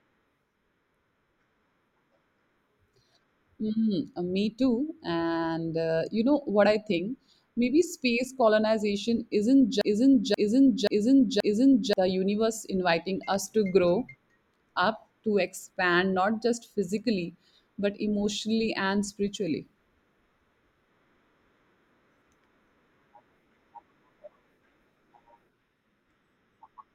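From 9.81 s to 11.93 s the speech falls into a broken-record loop: a 0.53 s fragment repeats four times, likely from a stalled player resending its last buffer.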